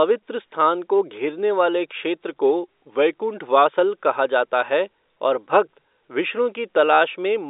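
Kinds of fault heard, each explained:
Drift correction step, 2.29 to 3.65 s: the speech abruptly slows by 5.4% and drops by 96 cents, just under a semitone. Pitch and tempo move together for the whole stretch, then snap back to normal at 3.65 s. Because speed and pitch are locked in step, this is likely a clock-matching resampler that changed its playback rate in one jump to rebalance its buffer.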